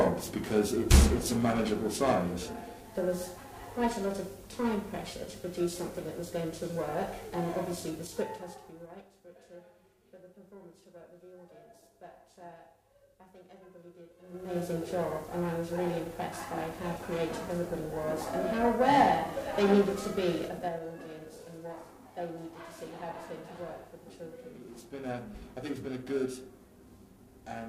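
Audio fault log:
Throughout: periodic clock jitter. The converter's sample clock is being nudged back and forth at a steady rate of around 1 kHz, so each component of the sound picks up sidebands roughly 1 kHz above and below it. The sidebands grow stronger as frequency rises, which gives high-frequency content a rough, metallic edge. The roughness rides on the signal itself, disappearing whenever the sound stops.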